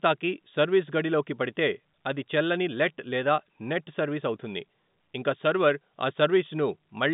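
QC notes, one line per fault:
No faults to note in this speech clip, which carries the narrow band of an ordinary telephone line.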